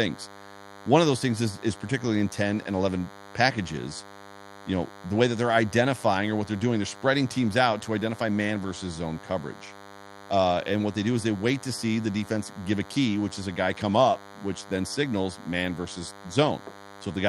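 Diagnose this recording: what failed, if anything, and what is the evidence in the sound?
Analogue stage pickup: a thin, steady DECT cordless phone buzz at 100 Hz, rich in harmonics, runs under the speech for the whole clip, roughly 20 dB down. A nearby DECT handset or base fires radio bursts every 10 ms, and something in the analogue input rectifies them into audio.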